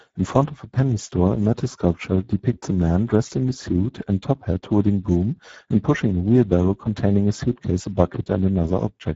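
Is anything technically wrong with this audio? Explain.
Yes. Speex codec damage runs through the whole clip. With too few bits to code the excitation, this CELP coder leaves the speech audibly noisy and hoarse, which points to a low setting near 10 kbps. Nothing survives above 7.7 kHz, and the upper band is only shaped, noise-like fill.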